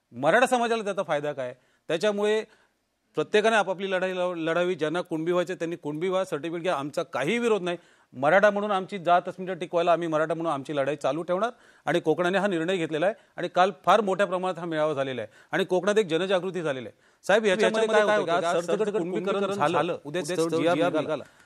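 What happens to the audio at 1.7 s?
Nothing goes wrong at 1.7 s; the audio plays through that moment intact, with no dropout, click or distortion.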